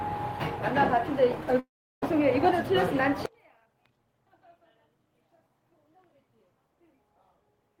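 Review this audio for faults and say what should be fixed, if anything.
From 1.59 s to 2.04 s there is a long network dropout. The last sound is stretched into a fading buzz, and then silence takes over for roughly a third of a second. The audio returns with about 300 ms missing, and the timing afterwards sits around 150 ms later. A gap this long is most likely a network outage rather than ordinary packet loss. Brief losses are patched seamlessly, while here the concealment visibly gives up. Preventing it means improving link reliability or adding redundancy such as forward error correction so that lost stretches can be rebuilt.

There are two jitter buffer speed-ups. The first runs from 2.12 s to 3.03 s, where the audio plays about 4% fast and roughly 40 ms is trimmed. The second runs from 3.66 s to 4.30 s, where it plays about 12% fast and roughly 100 ms is cut away. The receiver is removing small pitch-period slices to drain excess buffered delay, so the sound hurries along while its pitch stays the same. 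A plain resampling speed change would raise the pitch as well. Preventing it means tuning the buffer to shrink gradually, or to absorb bursts with a less aggressive target.

From 3.26 s to the end, one channel is inverted. When the two channels are summed to mono, the shared content cancels and the level falls by about 38 dB, leaving a faint trace of whatever differs between them. The likely cause is a polarity flip in one channel's path. A channel that had simply gone missing would lower a mono sum by only about 6 dB, not wipe it out. Preventing it means checking polarity with a correlation meter and correcting the wiring or the processing stage.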